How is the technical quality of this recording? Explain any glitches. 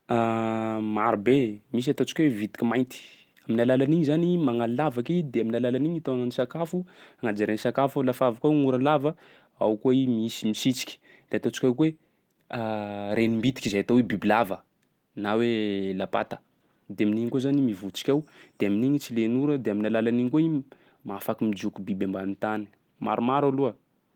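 No glitches turn up here at all, and the light Opus voice compression at 24 kbps, keeping the full band up to about 20 kHz, doesn't leave anything that stands out to the ear.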